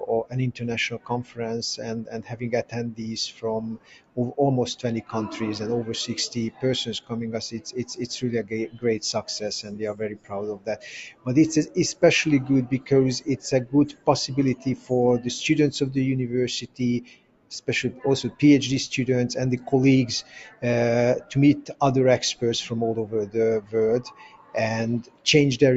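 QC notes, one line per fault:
Throughout: noise suppressor applied to music or sounds. A speech-oriented suppressor stays engaged across the whole clip and keeps treating sustained, steady content as noise, swinging its gain by around 15 dB as material comes and goes. Onsets slip through before it reacts, but held tones and decays are pulled down behind them. The result is audible pumping and a thinned, fluttering body beneath the transients, on top of a band that tops out near 8 kHz.
0.00–4.18 s, 6.51–12.03 s, 12.80–14.91 s, 16.63–18.41 s, 20.22–20.63 s, 21.21–21.81 s, 23.26–25.26 s: sound cut by the noise suppressor. In each span the suppressor classes part of the sound as noise and attenuates it harder than its surroundings. The deepest drops are about 17 dB in the first, fourth and last spans, about 16 dB in the second, third and sixth, and about 13 dB in the fifth. The affected portions total roughly one and a half seconds in each of the first two spans, under a second or so in the shorter ones, and a few tenths of a second in the brief spans near 20 and 21 s. 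Sustained and decaying material sinks or has its tail truncated, while sharp attacks mostly survive.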